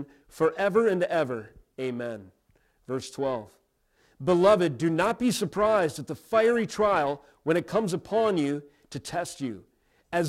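Periodic clock jitter runs through the whole clip, from start to finish. Interference at around 1 kHz is wobbling the converter's sampling clock at a steady rate, so every frequency in the speech picks up sidebands sitting roughly 1 kHz above and below it, with the higher-frequency components affected more. The result is a rough, metallic edge riding on the voice that disappears whenever the speech pauses into silence.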